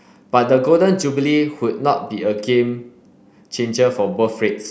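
No technical faults are audible.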